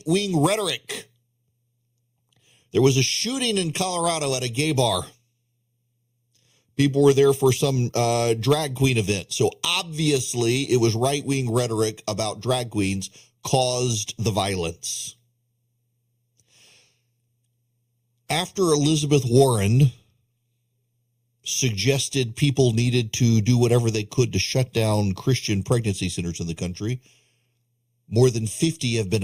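All the way through the speech there's a channel delay causing comb filtering: one side lags about a third of a millisecond, so the mono sum notches from around 1.5 kHz and sounds hollow.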